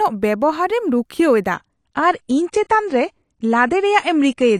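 From 1.55 s to the end, an adaptive stream at a lower bitrate takes over: the connection slowed and playback switched without a gap, which fits a step from about 96 to 32 kbit/s AAC. The speech abruptly loses everything above 9.9 kHz and gains codec artefacts.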